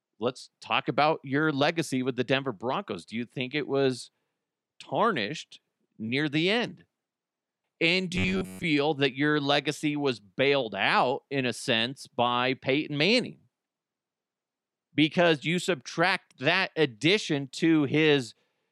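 Robotic sound, likely from repeated short buffers, at 8.16–8.65 s before "that your legacy was": a 93.8 Hz buzz, roughly repeating cycles on the waveform.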